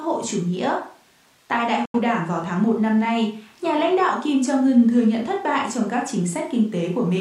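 Digital broadcast dropout at 1.85 to 2.00 s: the receiver lost valid frames and muted, fading to silence within 3 ms. The sound sent during that gap is lost.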